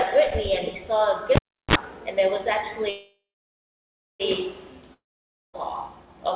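At 1.36 s there's a cable pulled and plugged in: a pop, about 0.35 s of near silence, a quick 60 Hz mains buzz of around 40 ms, then another pop at 1.75 s.

From 2.9 to 4.22 s you get a call audio freeze, likely the jitter buffer running empty. The last sound smears into a fading buzz or hiss, then about a second of silence, and it picks up right where it stopped. Nothing is lost, but everything after sits 1.3 s later.

At 4.94 to 5.55 s there's a long network dropout. The sound fades out, goes silent for about half a second, and comes back with roughly 0.6 s of audio gone. The loss of everything above 4 kHz from the call path runs throughout.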